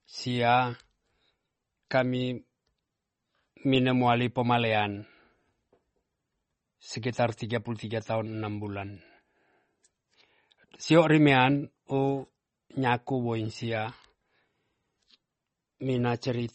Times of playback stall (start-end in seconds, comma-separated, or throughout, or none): none